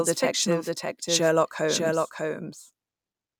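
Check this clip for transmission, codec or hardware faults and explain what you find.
The speech carries a doubled audio track from start to finish. A second copy of the full-band signal runs about 0.7 s behind the original. It sits a few decibels lower, roughly 5 dB down. The copy is dry, with no decay or room colour, so it is not an echo. Each phrase is heard again as a clean repeat. The likely cause is the signal being captured twice, once through a slower path.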